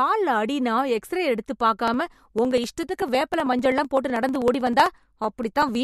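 From 1.81 s to 5.75 s the speech carries periodic USB or driver dropouts: every 0.0635 s a sliver of roughly half a millisecond is skipped, giving a steady ticking about sixteen times a second. The waveform shows small discontinuities at even spacing, and the spectrogram shows regularly spaced vertical lines.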